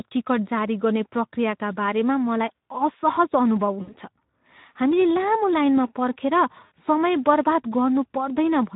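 Throughout the speech there is a hoarse, noisy graininess, with the upper band sounding like hiss rather than real detail. This is the Speex codec working with too few bits: its CELP excitation can't capture the fine structure of the voice, so the decoder substitutes approximate pulses and shaped noise. The plainly audible damage fits a low setting of around 11 kbps.

From 3.81 to 3.94 s the voice briefly stretches into a buzzy tone or coloured noise that fades before recovering, and the same thing happens from 6.65 to 6.72 s. Each is VoIP packet loss concealed by the speech codec. About 60 ms of audio went missing, and the decoder filled the gap by repeating its last pitch and filter while lowering the level. Because each decoded frame depends on the one before, the sound stays weak and distorted for a short while after real audio resumes.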